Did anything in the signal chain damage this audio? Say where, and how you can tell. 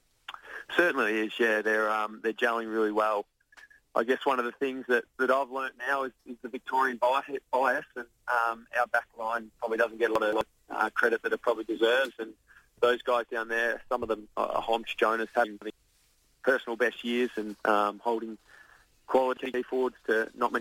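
Yes. At the driver or buffer stage there are chunks out of order: an 85 ms block arrived late and played after the blocks meant to follow it, at 10.16–10.41 s, 15.45–15.70 s and 19.37–19.54 s. Each causes a brief jumbled stretch with hard joins, though nothing is lost.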